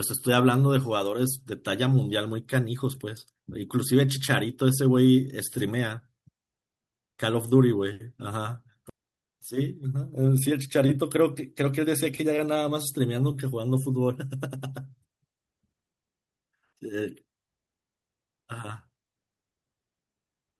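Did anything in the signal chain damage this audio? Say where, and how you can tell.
Yes. A skip ahead at about 8.9 to 9.0 s in this speech is a network or jitter-buffer fault. Roughly 0.7 s of audio is lost and the two sides are butted together with no gap, so the speech lurches forward abruptly.

Jitter buffer speed-up runs from 9.52 to 10.14 s and again from 10.85 to 12.70 s. The buffer, holding excess delay, trims pitch-period-sized pieces repeatedly. Speech plays at 108% speed with unchanged pitch, dropping roughly 50 ms and then 150 ms, so it sounds hurried.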